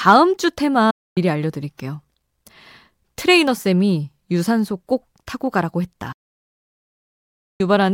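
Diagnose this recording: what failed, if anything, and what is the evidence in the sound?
A digital broadcast dropout at the reception stage: the speech fades to silence within about 8 ms at 0.90–1.18 s and again at 6.12–7.61 s, then resumes later in the programme. The receiver muted on failed frames. Unlike packet-loss concealment, the gaps are clean silence with nothing filled in.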